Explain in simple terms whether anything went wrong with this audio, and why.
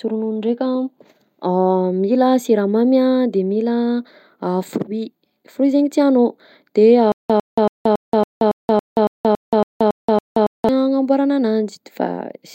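Stutter with silent gaps, from 7.12 s to 10.69 s, just after "tianao de": the same short scrap of speech, about 102 ms long, plays 12 times, each followed by about 177 ms of dead silence, so it repeats every 279 ms. This is most likely the playback or stream stalling. Each time it tried again, it replayed the last bit it had and then ran out. The speech that should have filled those seconds is missing.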